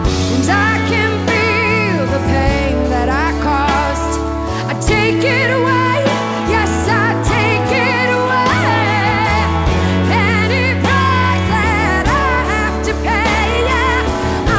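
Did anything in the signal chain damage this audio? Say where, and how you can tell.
No, nothing stood out on listening, and the only mark of the call path is that the sound stops at 8 kHz, which is what a G.722 link at 64 kbps delivers by design.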